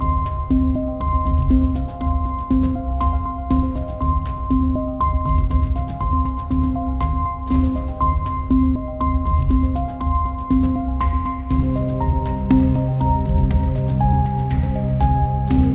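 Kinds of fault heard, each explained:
Nothing here counts as a fault; the sound comes over a normal call path with the band topping out around 4 kHz, which is just how a G.711 mu-law line at 64 kbps is meant to sound.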